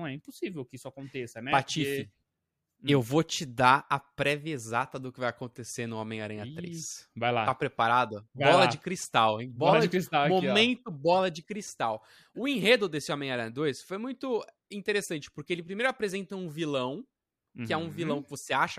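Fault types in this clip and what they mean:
Channel delay (comb filtering): at 13.53–14.61 s one channel lags by a tiny fraction of a millisecond, fitting a one-sample offset, so the mono sum cancels near 20 kHz, dulling the top of the speech.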